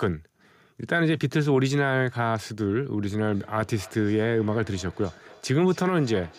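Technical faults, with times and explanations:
3.17 s to 6.39 s, feedback echo between two devices. The speech comes back as a quieter repeat roughly every third of a second, sounding thinner and more ringing than the original. The loudest repeat sits about 24 dB below the speech. Two devices in the same room share the call. One plays back what the other's microphone sent, and that microphone picks it up again. Each echo canceller removes only its own device's output, so this loop goes uncancelled.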